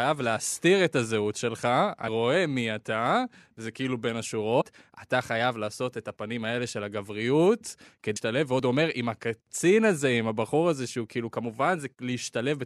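At 2.07 s a brief glitch cuts into the speech. It comes from damaged data in a compressed stream. A short stretch of the encoded file is wrong. The decoder misreads those frames and loses its place. It then hunts for the next valid frame header. The same fault returns from 4.60 to 4.62 s. It sounds again at 8.15 s. Each blip lasts only about 20 ms.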